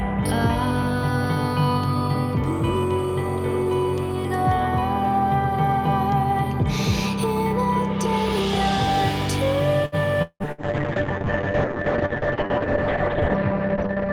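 The trouble starts at 9.85 s with a short stall from a late packet: the sound gets held for about 68 ms until the data shows up, nothing's lost, but everything after runs 68 ms later. At 10.22 to 10.43 s the sound smears into a fading buzz or hiss, goes silent for about 70 ms, then picks up with roughly 180 ms gone, likely a long network dropout. Right in the middle of that, from 10.28 s to the end, there's a call bitrate drop from 64 to 7 kbps, with bandwidth collapsing from 20 kHz to 6 kHz, so it stays muffled and rough for the last 3.9 s. Then at 10.52 to 10.61 s a burst of packet loss gets papered over with about 61 ms of decaying fill, leaving about 60 ms missing.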